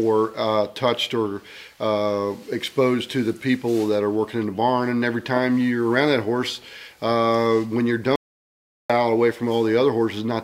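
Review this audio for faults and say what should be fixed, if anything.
An audio dropout to silence runs from 8.16 to 8.90 s. The sound cuts out and returns mid-flow. It leaves 0.74 s of total silence with no room tone. The input was likely lost while the recorder kept writing silence. Secure connections and check for stray mutes before recording.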